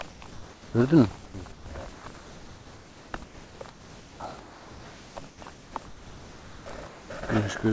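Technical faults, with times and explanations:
0.10–0.74 s, 1.26–1.66 s, 1.94–4.20 s and 5.28–7.10 s, comfort noise in place of the background: in each gap, about 0.54 s, 0.22 s, 1.96 s and 1.4 s of the real background are replaced by smooth, featureless hiss, likely because discontinuous transmission stopped sending audio and the receiver synthesised noise.
3.11–3.14 s, onset clipped by the voice detector: the sound returns abruptly, missing its first 30 ms. The voice detector was likely slow to register activity, so the opening was never transmitted and comfort noise filled that sliver instead of the soft attack.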